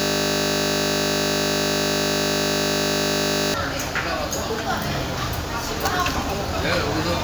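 A system hang loop is already under way when the clip begins and runs to 3.54 s, so the everyday sound is replaced by a single 20 ms fragment repeating exactly, over and over. With the processor or driver stalled, the audio hardware kept replaying the same stretch of its ring buffer. A loop this short, cycling 50 times per second, merges into a steady buzz at 50 Hz rather than a distinct stutter, which fits a small buffer.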